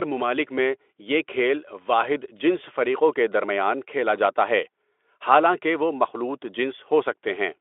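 Nothing goes wrong anywhere in this speech recording, so there's no technical fault to point to.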